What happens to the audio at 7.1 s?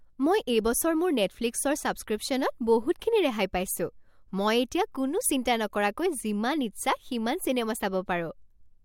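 Nothing goes wrong at 7.1 s; the speech plays through that moment intact, with no dropout, click or distortion.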